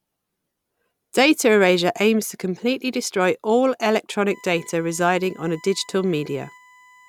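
USB whine starts at 4.28 s, just after "to completely destroy all", and continues to the end of the speech clip at 7.09 s. A steady, fixed-pitch tone sits under the speech, built on 1 kHz with its strongest component at 2 kHz, roughly 30 dB below the speech. The 1 kHz base matches the USB bus's 1 ms frame timing: the current it draws in each frame leaks into the audio through shared power or ground.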